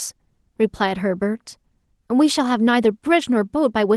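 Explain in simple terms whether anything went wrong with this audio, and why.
Nothing went wrong with this speech; it has passed through Opus voice compression, which leaves only a light coding trace that is normal for such compression and not a fault.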